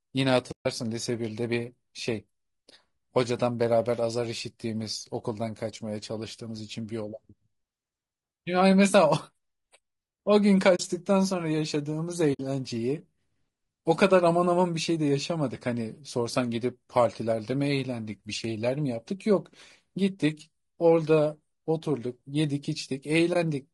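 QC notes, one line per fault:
throughout: low-delay AAC compression. The speech is rough and grainy, with noise filling the gaps between pitch harmonics and a thin, synthetic-sounding top band. This is likely AAC-ELD, the low-delay AAC used in video calling, at a low rate consistent with about 32 kbps. Its short frames separate harmonics poorly and spend bits inefficiently, so detail between harmonics is lost and the treble is rebuilt.
0.51–0.66 s, 10.75–10.80 s, 12.33–12.40 s, 23.33 s: AAC frame loss with muting. Soft-edged gaps of about 150 ms, 50 ms, 70 ms and 30 ms, where the sound fades out and back in. The decoder zeroed the spectrum of the missing frames, and the overlapping transform windows taper each gap over about a frame. The gap lengths fit frames of about 20 ms.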